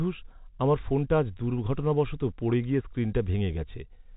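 Nothing stood out on listening to this speech, which comes through the narrow band of G.711 telephone coding with its faint level-following noise floor and no audible trouble.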